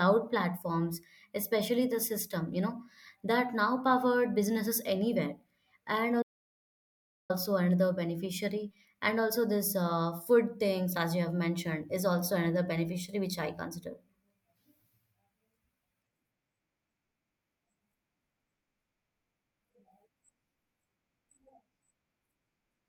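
It's a speech clip with an audio dropout to silence from 6.23 to 7.30 s: the sound cuts out mid-flow into dead digital silence, no room tone at all, for about 1.07 s. That likely comes from the input briefly disconnecting or muting while zeros kept being written.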